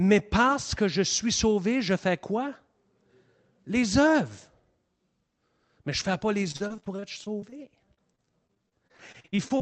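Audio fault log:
6.51–7.54 s and 7.94–9.62 s: repeated packet loss (robotic sound). Right after "je ne fais pas", brief gaps under 40 ms are patched by extending the last sound, so the speech turns choppy. The spectrogram shows smeared, repeated frames and notched dropouts below an 8 kHz codec ceiling.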